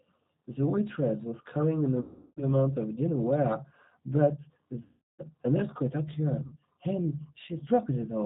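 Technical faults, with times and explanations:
Throughout: G.729 codec. The speech has passed through the G.729A codec at 8 kbit/s, which does not send the waveform. It sends a vocal tract filter, a pitch predictor and a few pulses per 10 ms frame, and the decoder rebuilds the voice from these. The damage is plainly audible: nothing above 4 kHz survives, so the sound is band-limited and dull, and the rebuilt excitation gives it a rough, slightly synthetic, buzzy grain.
2.01–2.42 s, 4.83–5.23 s and 6.46–6.56 s: VoIP packet loss concealed by the speech codec. Packets stopped arriving. The first two gaps each hid 360 ms of audio, which fits a burst of about 18 packets. The last gap hid 60 ms, which fits about three packets. Meanwhile the decoder kept repeating its last pitch and filter at falling gain, so the sound smears into a fading buzzy tone or coloured noise. Because each frame builds on the one before, the voice stays weak and distorted briefly after each gap.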